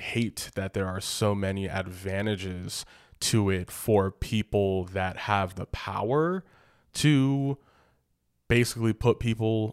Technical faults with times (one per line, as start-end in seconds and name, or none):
none